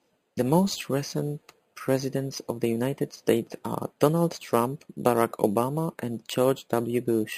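Speech with imaging from sample-and-hold upsampling throughout. Each sample appears to have been repeated without smoothing, which fits roughly 11 kHz audio raised to 48 kHz. A mirrored copy of the speech spectrum fills about 5.5 to 11 kHz, roughly 19 dB below the voice, heard as a bright metallic fizz. Unlike steady hiss, it rises and falls with the speech, and like aliasing, its tones run opposite to the voice's pitch movement.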